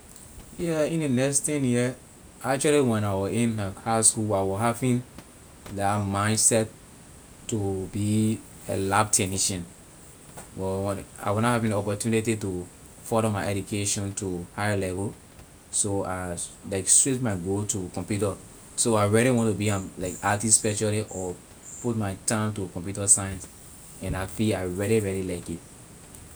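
No technical faults are audible.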